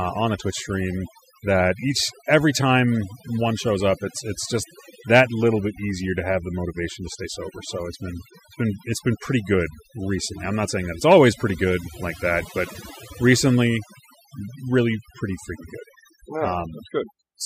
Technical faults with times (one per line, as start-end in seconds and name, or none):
0.00-17.45 overdone noise removal